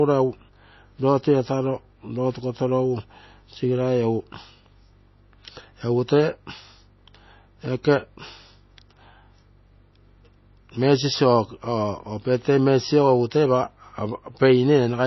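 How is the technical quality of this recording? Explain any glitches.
The quality is held back by one fault that runs the whole length: low-bitrate audio saved at a high bitrate. Nothing in the speech reaches above about 5.8 kHz, so it sounds dull and boxy, with the swirly smearing you get from heavy MP3 compression. That likely comes from an earlier pass at something like 24 kbit/s, later re-saved as a high-bitrate MP3. The second encode just faithfully keeps what the first one already threw away, so the bigger file doesn't sound any better.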